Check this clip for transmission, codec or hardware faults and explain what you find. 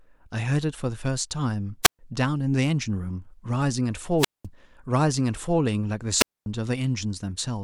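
The speech has a radio-link fault that occurs three times. A wireless microphone squelch dropout occurs at 1.83 to 1.99 s, 4.18 to 4.46 s and 6.17 to 6.46 s. The FM signal fades until the receiver's squelch mutes its output, leaving silent holes of about 0.13, 0.20 and 0.24 s before the speech returns.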